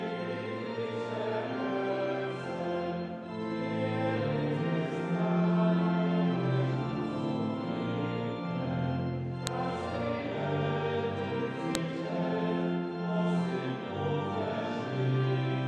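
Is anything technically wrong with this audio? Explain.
Yes. Separate WAV pieces were joined without their headers being stripped, so each header's few dozen bytes of file metadata were read out as if they were samples. This is a file header played as audio, and it happens at 9.47 s and again at 11.75 s, where new pieces begin. Each time, those bytes produce a sharp, loud click or snap that has nothing to do with the surrounding sound and cuts abruptly across it.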